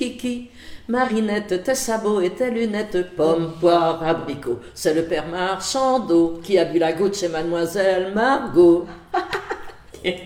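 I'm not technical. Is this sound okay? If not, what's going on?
No. There are three brief glitches, at 1.04 to 1.11 s, 4.19 to 4.30 s, and 8.93 to 8.96 s. Each is AAC frame loss with concealment: a tiny slice of the compressed audio went missing, roughly a twenty-fifth of a second, and about twice that at 4.19 s. The player patched each gap by guessing from the sound just before it, so you hear a short smeared, noisy blur instead of a clean dropout.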